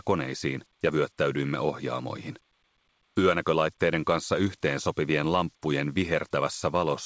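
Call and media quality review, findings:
No findings for call and media quality: the call path is working normally, with nothing above 8 kHz, which fits a wideband codec such as G.722.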